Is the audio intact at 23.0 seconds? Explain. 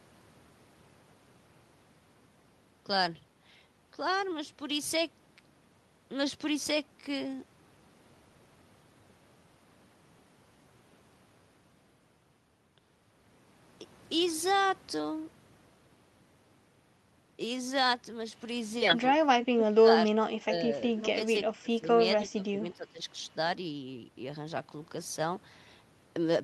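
No. At 23.0 seconds you're right at the tail of a speech-suppressed-in-double-talk event running from about 22.27 to 23.07 s. The speech sinks by roughly 15 dB at its worst, and the ducking covers most of that stretch, about 0.7 s. The likely cause is an echo canceller that couldn't tell the near talker apart from loudspeaker echo while both sides spoke at once, so it pulled everything down together.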